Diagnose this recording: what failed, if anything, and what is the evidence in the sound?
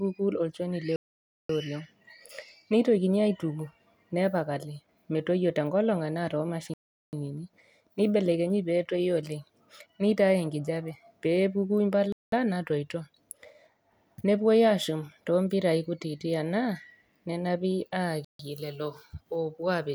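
Speech cuts to dead silence four times, then resumes: 0.96 to 1.49 s, 6.74 to 7.13 s, 12.12 to 12.32 s (after "oleng nitauni nkinyat peepuku") and 18.25 to 18.39 s. At playback, this is likely a Bluetooth stall: delayed packets emptied the headphones' buffer until resends arrived.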